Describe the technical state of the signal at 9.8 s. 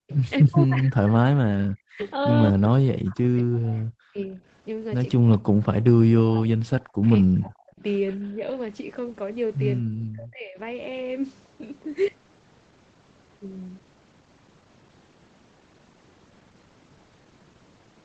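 At 9.8 s the speech abruptly sinks and breaks up. Over roughly 0.7 s of the span up to 10.58 s, it drops away by as much as about 40 dB, thinning and cutting out in pieces. This is likely speech suppressed in double talk. With both ends of the call talking at once, the echo canceller apparently couldn't tell the near talker from loudspeaker echo, so it attenuated everything together.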